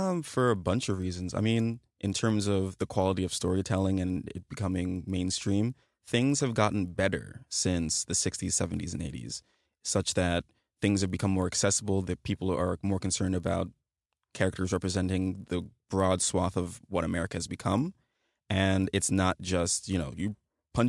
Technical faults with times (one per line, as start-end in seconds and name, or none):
0.00-20.88 resampler restarted on every block